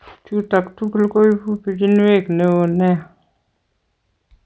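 Throughout the speech, the resampler restarted on every block: each 40 ms block was converted from 24 kHz to 16 kHz in isolation, so its edges lacked true neighbouring samples. The resulting edge errors repeat at 25 Hz, heard as a rough buzz under the speech.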